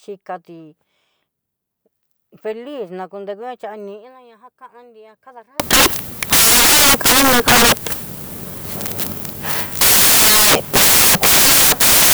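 From 5.60 s to the end of the clip, the samples are built from the wrong bytes: the reader assembles each sample with its bytes misaligned or in the wrong order, so the rapidly fluctuating low-order bits land in the most significant position. The speech is replaced by loud, harsh broadband noise, close to white on the louder sounds.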